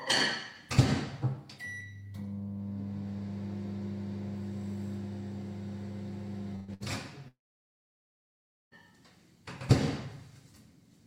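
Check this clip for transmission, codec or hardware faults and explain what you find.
Transmission faults are present: two bursts of packet loss followed by a long dropout in this recording of everyday sounds.

Burst of packet loss, 6.55 to 6.71 s and 6.74 to 6.83 s: consecutive packets went missing, so the receiver stretched the last sound into a fading hiss. About 120 ms and 60 ms of sound are skipped.

Long network dropout, 7.28 to 8.74 s: a likely stall in arriving data leaves a brief fading tail, then about 1.4 s of silence before the sound resumes further along.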